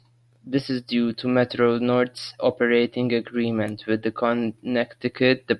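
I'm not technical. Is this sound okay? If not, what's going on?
Yes, this sound is okay, and nothing is going wrong in it.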